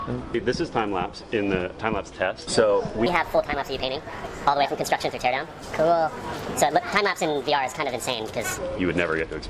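From 3.06 to 8.58 s there's a wrong sample rate fault: the audio runs about 1.45 times fast, roughly 6.5 semitones sharp, which fits 22 kHz material played at 32 kHz.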